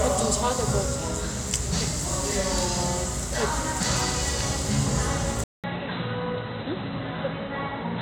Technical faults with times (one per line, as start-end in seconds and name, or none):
5.44-8.01 input switched to a poorer device